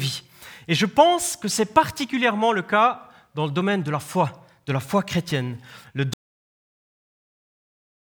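At 6.14 s the speech cuts off abruptly into an audio dropout to silence that lasts to the end. The input was likely lost while silence kept being written, so even the room tone vanishes. The waveform goes to a flat line there, and the spectrogram turns fully blank.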